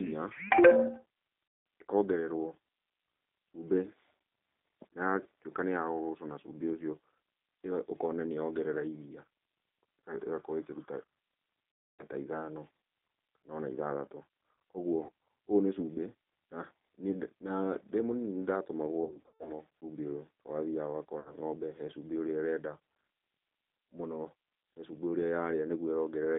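The whole thing runs through a G.729 codec, narrowband 200 Hz to 3.7 kHz at 8 kbit/s, so speech sounds thin, slightly rough and synthetic throughout.

On top of that there's VoIP packet loss concealed by the speech codec: at 1.48 s (180 ms lost), 11.85 s (270 ms), 15.03 s (60 ms), 19.04 to 19.52 s (270 ms scattered, longest gap 120 ms) and 21.20 s (60 ms). Each time, the decoder stretches the last sound into a fading buzzy tone or coloured noise and takes a moment to recover.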